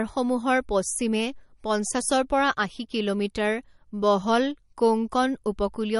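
Speech, compressed throughout by what is likely a low-bitrate MP3 encoder, consistent with roughly 40 kbps. Starved of bits, it removes everything above 11.1 kHz and drops weak frequency lines, so the sound is dull and plainly watery and swirly from start to finish.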